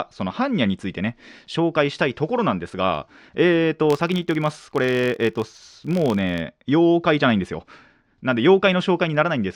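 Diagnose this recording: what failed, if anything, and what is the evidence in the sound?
From 3.90 to 6.44 s, a level-following 47 Hz buzz: a processing-stage filter restarted on every block, fitting 1024-sample blocks; the spectrogram shows evenly spaced vertical stripes.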